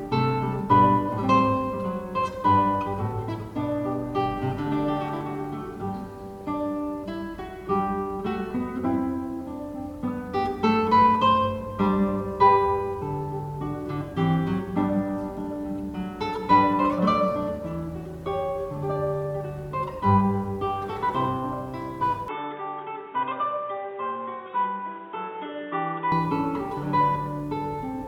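Input switched to a poorer device, 22.28 to 26.12 s: likely a change to a narrower-band microphone cutting everything above 3.8 kHz, so the sound turns dull, slightly quieter and faintly noisier.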